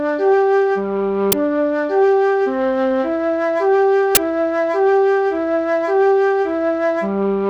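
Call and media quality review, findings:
Uninitialised buffer: short, loud bursts of digital noise at 1.32 s and 4.15–4.17 s, lasting 10 ms and 20 ms, which fits 10 ms and 20 ms playback blocks. Playback/output buffer handed to the device before being filled, so stale memory played as samples.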